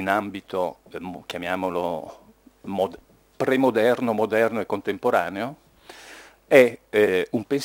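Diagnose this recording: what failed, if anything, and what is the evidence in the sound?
The converter failed here: sample clock jitter runs through the whole recording. Timing errors of several microseconds make the sampling error track the waveform's slope, so a grainy hiss roughly 30 dB under the signal swells on loud, bright passages. A spectrogram shows haze hugging high-energy regions.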